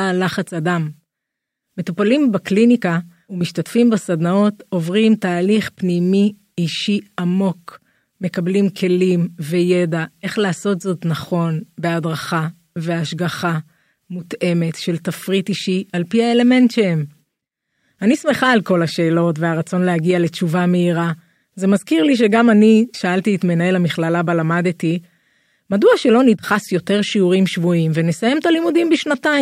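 No technical faults occur at any point in the recording, so there is nothing to place in time order.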